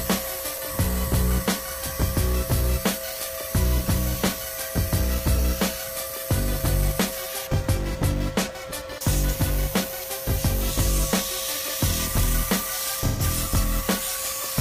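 AAC frame loss with concealment occurs from 13.00 to 13.22 s, near the end of the audio. About 128 ms of coded data never reached the decoder, which fits roughly three AAC frames. The decoder bridged the gap by reusing the spectrum from the last intact frame, randomising its signs or interpolating its energy. Because the gap is short, the result is a brief smeared, noisy or phasey patch rather than a dropout into silence.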